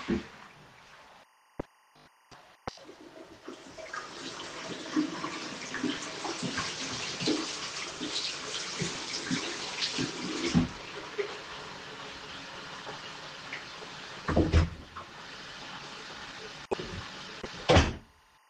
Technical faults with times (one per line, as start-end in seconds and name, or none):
0.00-18.50 timecode bleed